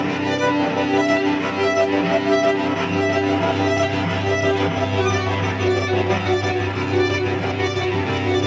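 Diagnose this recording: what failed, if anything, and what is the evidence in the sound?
Nothing failed; the recording shows no audible faults.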